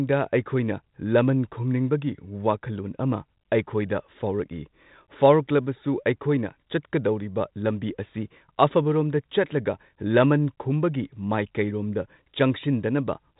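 Speech recording with no technical faults to report.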